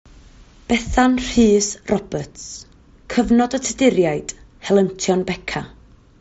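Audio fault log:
No faults logged; the speech arrives over a Bluetooth mSBC headset link, bandwidth topping out near 8 kHz with only light grain on the louder passages.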